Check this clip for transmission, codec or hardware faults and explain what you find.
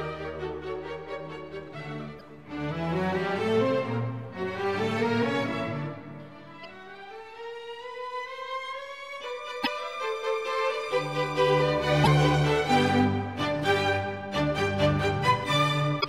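There's one kind of fault here, damaged data in a compressed stream, hitting five times: 2.19–2.21 s, 6.63 s, 9.60–9.67 s, 12.01–12.07 s and 15.98–16.05 s. Corrupted bytes make the decoder misread frames and lose sync while it hunts for the next header, so each spot comes out as a short chirp, squawk or blip in the sound.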